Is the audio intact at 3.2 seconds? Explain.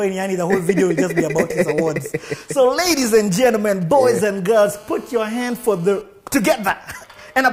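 No. From 2.73 to 4.39 s, GSM signalling bursts from a nearby phone are rectified by the audio circuit, giving galloping ticks and a 217 Hz buzz roughly 25 dB below the signal. A spectrogram shows grouped vertical stripes; the waveform shows clustered spikes.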